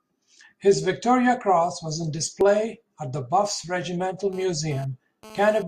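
A speech recording with two distinct faults. Just after "was on", at 2.41 to 2.44 s, there is an overlap between stream segments: about 30 ms of audio is missing and the waveform steps abruptly, producing a brief skip. This happens when a segment's time stamps claim material already covered by its neighbour and the player discards that span as a duplicate. The stream is cut into 4-second segments. From 4.33 to 5.63 s a GSM phone buzz sits under the speech at about 20 dB below the signal. It is a harsh, raspy tone at 217 Hz with a dense harmonic series and no relation to the speech. A nearby 2G handset is transmitting in bursts at that rate, and the audio circuitry rectifies the radio pulses into the signal path. The buzz appears only for this stretch rather than running throughout, as happens when the handset is moving data rather than holding a call.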